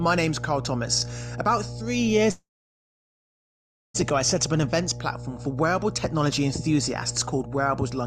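Mains hum runs throughout the speech as a steady 60 Hz tone with low harmonics, roughly 10 dB below the speech level, from power-line coupling such as a ground loop or nearby transformer.

A call audio freeze runs from 2.31 to 3.96 s. The last sound is briefly held as a fading buzz or hiss, then about 1.5 s of silence, after which speech resumes from where it stopped. The likely cause is delayed packets draining the jitter buffer. Nothing is lost, but everything after the freeze arrives about 1.63 s late.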